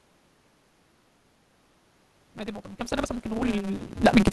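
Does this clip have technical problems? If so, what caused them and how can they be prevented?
Yes. The whole clip suffers from a block size mismatch (truncated). One stage hands over longer blocks than the next stage takes, which fits a 256-sample read, and the tail of every block is discarded. The result is a steady buzz at about 188 Hz, and speech that runs 1.88 times too fast while keeping roughly its normal pitch. That unchanged pitch separates it from a sample-rate or resampling error, which would raise pitch along with speed. Configuring both stages to the same block size prevents it.

From 2.78 s to 4.26 s there is automatic gain rising. The input level dropped by about 12 dB, and the gain control responded by slowly lifting its gain by about 5 dB over more than a second. The room noise grows along with the speech, and that shared swell is what distinguishes it from the natural level shifts around 2 s and 4 s where the talker moved, which change only the voice. 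Using a fixed gain, or a slower gain control with a ceiling, prevents it.

At 3.38 s, a single 10 ms frame is lost in the LE Audio stream. The LC3 decoder fills the gap by repeating the previous spectrum with randomised phase, so tonal speech briefly becomes a noisy smear. A plain dropout would leave a silent gap or a click instead. Because only one frame is missing, the smear is too short to fade into silence. A stronger Bluetooth link with less radio interference, or retransmission headroom, prevents it.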